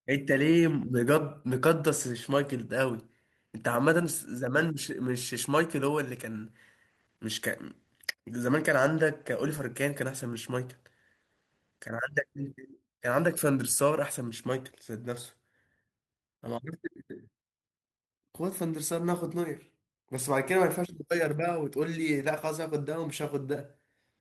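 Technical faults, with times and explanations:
9.57–9.59 s, lost packet rebuilt from error correction: a single 20 ms stretch of speech turns briefly rougher and noisier. The sound fits one lost packet whose content was recovered from the low-bitrate backup copy carried in the following packet and decoded in its place. On the waveform there is no dropout or flat gap. On a spectrogram, the harmonics in that slice look smeared, with more noise filling the spaces between them.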